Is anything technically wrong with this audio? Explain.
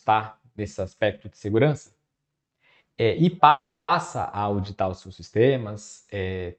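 Yes. At 3.49 s, right after "é e", the speech stops and the last sound trails on as a short fading buzz or hiss that sinks into silence for roughly 0.29 s. At 3.91 s it resumes with "a auditar os seus", nothing lost, just pushed back by 0.39 s. This is a call audio freeze, likely from packets held up in transit that let the jitter buffer run dry, so the receiver stretched the last sound until audio arrived again. The call path's bandwidth tops out near 8 kHz.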